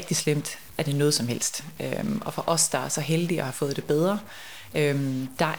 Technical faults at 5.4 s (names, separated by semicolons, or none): stuck bit